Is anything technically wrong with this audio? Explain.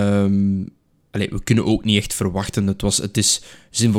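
No, nothing technical stands out here; the speech comes across just as it should, with no faults to flag.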